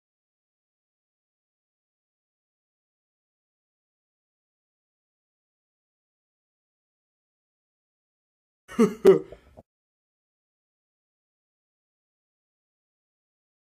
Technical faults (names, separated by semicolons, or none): block of digital silence